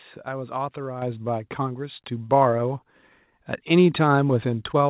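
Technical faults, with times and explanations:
1.02 s and 2.04 s, microphone volume stepped up: voice and background jump louder together, by about 6 dB then about 4 dB, as the software raised the input gain in single steps.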